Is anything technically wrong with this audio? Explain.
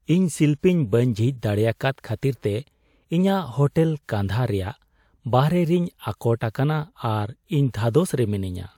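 No, nothing technically wrong stands out here; the speech comes through without any audible faults.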